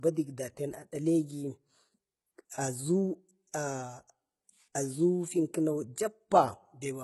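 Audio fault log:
throughout: low-bitrate audio saved at a high bitrate. Nothing is heard above 11.8 kHz, and the speech keeps the coding artefacts of its first encoding. This is likely a very low-bitrate first encoding later re-saved as a high-bitrate MP3, which cannot restore what was lost.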